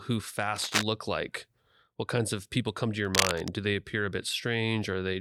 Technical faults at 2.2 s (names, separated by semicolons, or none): none